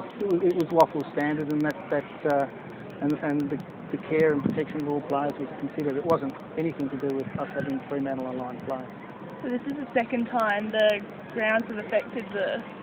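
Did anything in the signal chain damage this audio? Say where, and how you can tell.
Yes. The damage happens at the driver or buffer stage: periodic USB or driver dropouts. From 0.11 s to 12.70 s a tiny gap of silence, a fraction of a millisecond long, cuts into the signal every 0.1 s, giving a steady ten ticks per second that are audible only where there is sound. The strict clock-like spacing points to a background task stalling the bus or driver at a fixed interval, unlike the random clicks of a loose analogue connection or network packet loss.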